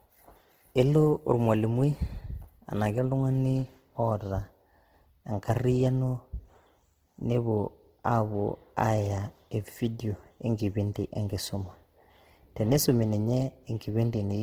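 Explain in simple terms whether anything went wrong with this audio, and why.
The speech sounds rough, grainy and noisy from start to finish, most likely due to Opus compression. The encoder kept the full range of frequencies but, short on data, filled in fine detail with approximated noise instead of the original sound.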